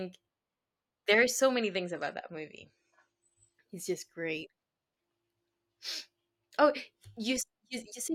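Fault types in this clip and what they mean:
adaptive stream at a lower bitrate: the player switched to a cheaper encoding of the stream for a stretch, typically because available bandwidth fell, then returned to the better one. In this speech clip the change hits abruptly at 1.55 s and lasts two seconds, to 3.55 s, with no gap at either edge. During that span nothing survives above 9 kHz, sibilance dulls, and codec artefacts thicken, which fits a drop from 96 to 32 kbit/s AAC.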